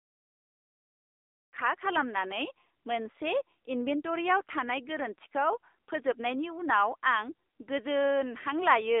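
Throughout the clip, including the smooth fade-in ending at 1.57 s, the speech carries AMR narrowband mobile codec damage. Everything above about 3.7 kHz is cut and below 300 Hz is thin. The spectrogram shows a hard ceiling, and the voice sounds plainly buzzy and synthetic, which fits a low mode near 7.4 kbps.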